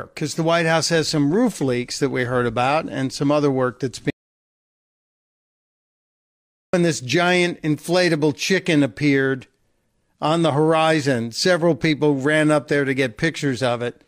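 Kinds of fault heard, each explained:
Audio dropout to silence: from 4.10 to 6.73 s the speech stops abruptly and the signal falls to silence, with no room tone, for about 2.6 s before resuming mid-flow. This likely reflects a lost input, with the recorder writing silence; the speech in that span is gone.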